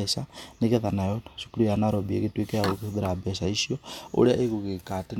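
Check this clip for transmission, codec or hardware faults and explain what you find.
Nothing to report: no transmission, codec or hardware faults are audible anywhere in this speech recording.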